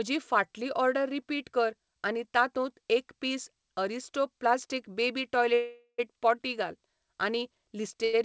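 At 5.54 s, right after "पीस अरिस्टो प्लास्टिक बेबी", the speech hangs until 6.00 s in a call audio freeze. The last sound drags on as a fading buzz and then about 70 ms of silence. It's likely packets stuck in transit draining the jitter buffer, with the talk resuming where it left off.

Near the end, from 8.04 to 8.15 s, there's a short stall from a late packet. For about 89 ms the receiver stretches the last sound while waiting, so it's held slightly too long with a faint buzz before carrying on, nothing lost. The band tops out at 8 kHz, which points to a G.722 call path.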